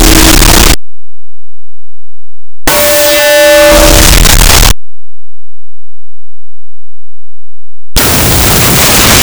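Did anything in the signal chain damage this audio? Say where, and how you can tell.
Yes. From start to finish the clip is buried under loud, harsh noise, with the underlying audio faint, slowed to half speed and an octave low. This is a wrong sample width at the sample-format conversion stage: 16-bit integer data was read as unsigned 8-bit, splitting every sample into two mismatched bytes.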